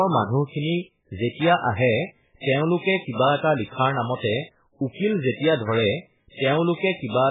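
From start to finish, the speech shows heavy MP3 compression damage. Nothing is heard above about 3.8 kHz. Weak frequency lines drop in and out between frames, giving a watery, swirling texture. The damage fits a very low bitrate, likely around 8 kbps.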